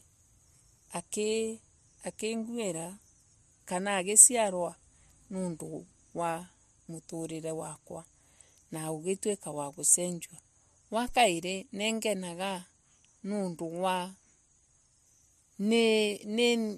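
Phantom power thump at 11.09 to 11.17 s in this speech, just before "ningenaga niundu wa": a supply switched on or off on a live input sends a step through the coupling capacitors, giving a deep thump that fades in 19 ms.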